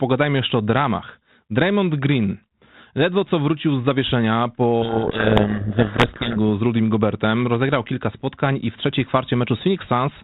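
A codec payload misread hits this speech clip from 4.82 to 6.38 s: the receiving end unpacked the G.726 code words in the wrong bit order, so each sample's coded difference from the adaptive prediction was read as the wrong value. For those 1.6 seconds the speech sinks under harsh, grinding distortion, then clears once both ends agree on the packing again. The 32 kbit/s G.726 coding itself leaves only light damage and a telephone band ending near 4 kHz.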